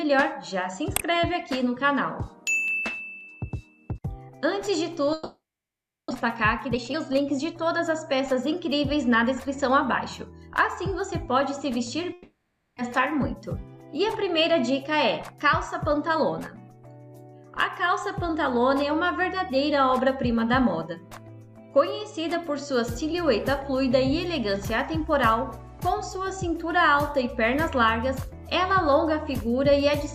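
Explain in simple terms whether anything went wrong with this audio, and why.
Yes, a few things went wrong.

At 2.68 s there is one sharp click. This is dropped samples. A tiny sliver of audio, likely just a couple of samples, went missing. The sound jumps ahead and snaps. Nothing audible is lost.

From 5.13 to 6.12 s, and again from 12.13 to 12.90 s, there is a long network dropout. The sound smears into a fading buzz, then goes quiet. About 0.6 s of audio is missing each time. The likely cause is a network outage.

Right after the first dropout comes jitter buffer speed-up. From 6.26 to 9.83 s the audio plays about 8% fast, skipping roughly 0.3 s in total. Smaller speed-ups follow at 10.82 to 11.97 s and 13.99 to 14.84 s, about 3 to 4% fast. The pitch stays the same, but the first stretch sounds hurried.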